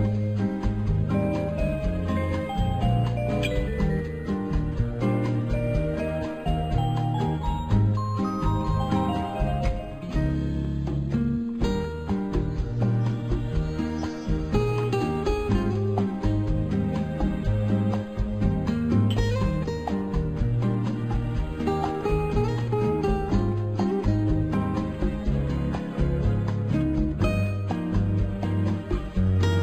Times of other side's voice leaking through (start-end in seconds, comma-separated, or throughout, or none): none